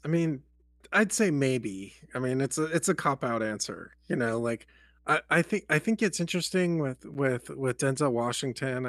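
From start to finish the speech sits on a steady mains hum at 60 Hz, with some low harmonics above it. Power-line current has coupled into the signal path, most likely through a ground loop between connected equipment or from a transformer close to the cabling. The hum sits about 35 dB below the speech. It stays constant under and between phrases, and it is most exposed in the pauses as a low, continuous drone.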